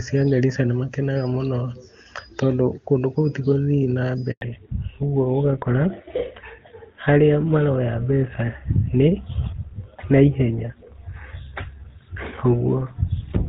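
At 4.31 s the call is passed between networks and no speech frames arrive during the switch, causing a handover gap. The speech cuts out within a few tens of milliseconds and stays silent for 100 ms, until 4.41 s, and whatever was said in that window is lost.

From 4.41 s to the end, the link drops from HD Voice to an older codec in a fallback to narrowband. Before this point the AMR wideband (HD Voice) codec is audibly clear, which fits its top rate near 24 kbit/s. After it, nothing above 4 kHz remains, which points to GSM full rate at 13 kbit/s, and the speech sounds duller and rougher.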